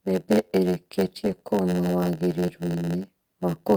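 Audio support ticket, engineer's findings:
Block size mismatch (padded): writer blocks shorter than reader's, remainder zero-filled. Continuous 91.9 Hz buzz throughout; speech runs at 0.919x speed, pitch roughly normal.

Lost packet rebuilt from error correction: Opus in-band FEC copies played at 1.23–1.34 s (60 ms, fits three 20 ms packets) and 2.32 s (fits one packet). No gaps; audio rougher, noisier there.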